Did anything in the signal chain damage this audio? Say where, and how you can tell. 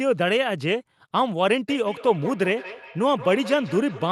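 Yes. From 1.68 s to the end, the speech returns at a steady interval of roughly 200 ms, peaking about 15 dB below the direct sound, each pass thinner and more ringing. That is feedback echo between two devices, a call-processing failure: a second device in the room replays the call, and no echo canceller covers that acoustic loop. Room reverberation would smear the speech rather than repeat it at a fixed spacing.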